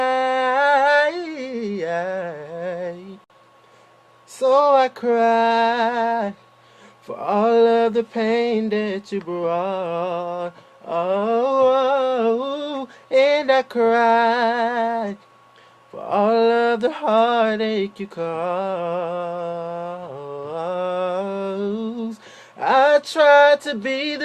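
Separately encoded pieces of this audio were joined without trimming the encoder's start-up delay or the padding on the final frame, leaving a gap at a join of encoded pieces. At 3.24 to 3.30 s, continuous sound drops into a gap of about 57 ms. Its edges are smeared by the codec, so the truly silent part is shorter than that, and the audio then resumes exactly where it left off, as though briefly paused rather than cut.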